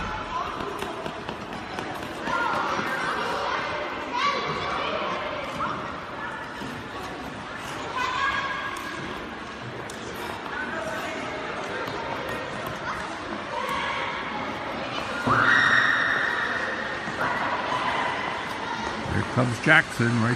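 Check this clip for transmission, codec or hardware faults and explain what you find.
The clip shows sample clock jitter, present from start to end. The converter's clock wanders by roughly a microsecond or two, so each sample is captured slightly early or late at random. The resulting amplitude error scales with how steeply the waveform is changing, landing at roughly 35 dB below the signal. It is heard as a fine hiss or grit that swells on loud, bright passages and disappears in quiet gaps.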